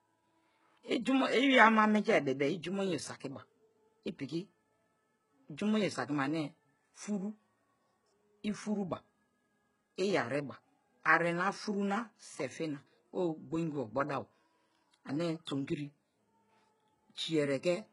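From start to finish the speech carries heavy coding damage, most likely from HE-AAC compression, with the artefacts pointing to HE-AAC v2 at a very low rate of around 12 kbps. Only the lower spectrum is properly coded. The upper band is synthesised by copying lower bands upward under a coarse envelope, and it stops completely at 11.1 kHz. The treble therefore sounds bright but false, its harmonics don't align across the crossover, and s sounds come out gritty and metallic.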